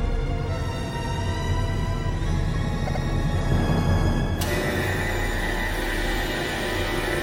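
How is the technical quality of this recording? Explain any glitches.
There's one glitch worth flagging: repeated frames, from 2.86 to 3.02 s. A block of 78.4 ms of compressed audio gets played two extra times, so that same sliver of sound comes round again in a quick stutter. What's happened is the decoder was handed the same frames more than once and simply decoded them again each time. The block length fits a short run of about three frames, and the repeats stretch the clip by 156.7 ms.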